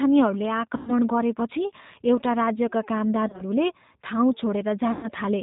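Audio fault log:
Throughout: G.729 codec. The speech is squeezed through an 8 kbit/s codec that rebuilds it from a vocal tract model and a handful of pulses per frame, so it comes out band-limited below 4 kHz with a plainly rough, slightly synthetic edge.
0.77–0.93 s, 3.28–3.42 s, 4.92–5.09 s: VoIP packet loss concealed by the speech codec. Around 100 ms goes missing in the first gap and about 110 ms in the last. In the middle one, 70 ms is lost in short bursts of up to 30 ms spread across 120 ms. Each time the decoder stretches its last pitch and filter into a buzzy tone or coloured noise that fades, and the voice stays weak or distorted just after packets return.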